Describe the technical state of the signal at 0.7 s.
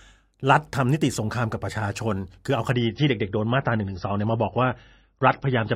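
At 0.7 s the speech signal is intact, with no audible fault at that moment.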